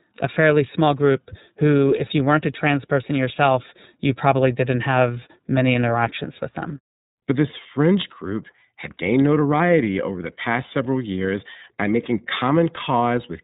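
From start to end the speech carries iLBC codec damage, and it is plainly audible. Everything above about 3.8 kHz is missing, so the sound is dull and narrowband. Each 30 ms block is coded on its own without reference to the previous one, which fits a rate near 13.33 kbps and leaves the speech rough and slightly synthetic.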